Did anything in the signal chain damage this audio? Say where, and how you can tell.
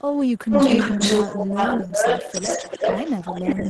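Yes. The damage happened in call processing at the far end. From 0.37 s to the end, an echo leak adds a delayed copy of the speech about 0.38 s behind the original, roughly 5 dB louder than the speech. That points to a loudspeaker pickup that the far-end echo canceller likely failed to suppress, so the copy was sent back into the call.

In the network stage, several lost packets were rebuilt from error correction at 1.42, 1.55, 1.58, 1.79, 1.90 and 2.11 s, each about 10 ms long. The Opus decoder played the low-bitrate copy carried in the following packet, so there is no gap. Each of those moments sounds briefly rougher and noisier than the surrounding 12 kHz-band audio.

Short concealed packet loss also occurs from 1.77 to 1.80 s and from 1.87 to 1.91 s, with about 10 ms and 30 ms missing. The receiver extrapolated the preceding sound to fill each hole and then crossfaded back. You hear this as a brief smear or wobble, and each patch ends where a recovered redundant packet takes over.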